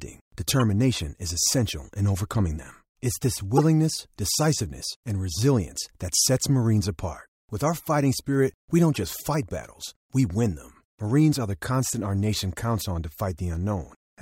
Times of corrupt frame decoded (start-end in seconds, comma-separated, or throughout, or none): 0.60-0.62, 3.57-3.60, 5.31-5.35, 8.94-8.98